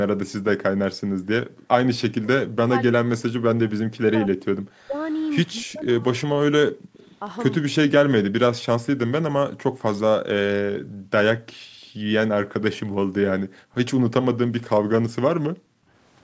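From 1.01 to 1.68 s, the background is gated by the echo canceller. The room sound drops by about 40 dB for a moment, then returns when the canceller releases.

Between 2.03 and 6.98 s, the speech dips deeply and breaks up for around three seconds in all. This is likely speech suppressed in double talk, with both ends active at once.

From 6.98 to 7.16 s, a faint copy of the voice returns 264 ms late, far below the speech. This is likely an echo leak from a loudspeaker.

The same double-talk suppression likely cuts into the speech again from 7.96 to 8.66 s, for about half a second.

The echo canceller gates the background four more times, at 9.71 to 9.82 s, 10.82 to 12.06 s, 13.46 to 13.75 s and 15.65 to 15.92 s. Each time the room sound falls by about 40 dB and comes back.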